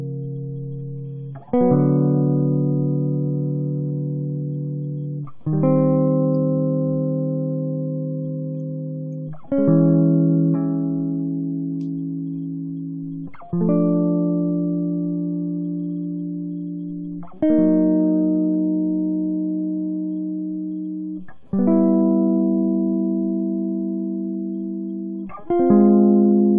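Music, with no audible faults.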